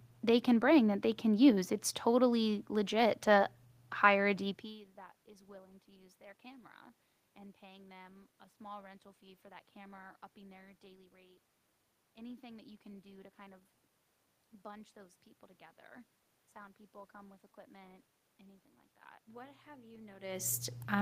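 No technical faults are audible.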